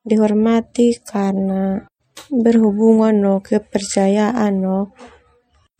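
Speech with MP3 compression damage throughout: swirly, watery sibilants, likely from an encoder starved of bits, the sort of thing a 64 kbps setting gives.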